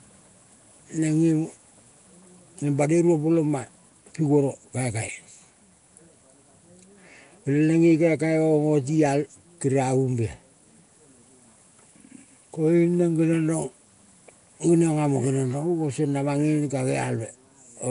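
Throughout the speech, a rough, hissy halo and smeared, underwater tone likely come from Nellymoser compression; a spectrogram shows noise-filled bands and nothing above 10.6 kHz.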